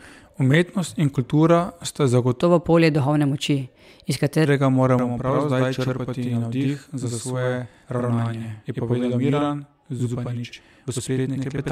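A section at the wrong speed runs from 2.42 to 4.46 s. For those two seconds the speech plays 1.18 times faster than it was recorded, so it sounds hurried and about three semitones higher, then drops back to its natural pace and pitch at the boundary. Because speed and pitch shift together, the likely cause is a player or edit running that stretch against the wrong clock rather than any deliberate pitch effect.

Channel delay (doubling) begins at 4.99 s and lasts to the end of the clip. One channel arrives about 85 ms behind the other, and when the two are folded to mono the late copy is heard as a distinct slap at equal level, giving every syllable a doubled edge. A fixed lag of that size fits a 4096-sample buffer holding one side back.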